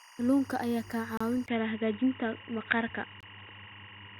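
Throughout, timecode bleed from linear timecode at 24 frames per second leaks in as a chirping warble alternating near 1 and 2 kHz, roughly 25 dB below the speech.

At 1.17 to 1.21 s, just after "ayaa kaa", a gap between stream segments appears. Mistimed 2-second segments leave a 31 ms hard-edged silence, and a second 23 ms gap follows at 3.21 to 3.23 s.

From 1.46 s, after a 20 ms silence, the speech turns dull and boxy with nothing above 3.8 kHz. The level stays about the same, and a new noise floor sits around 40 dB down. The likely cause is the input being switched to a poorer device.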